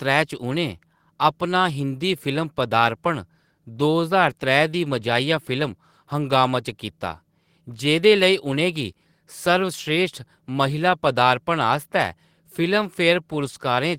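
Nothing stood out as a technical problem on listening to the speech in this recording.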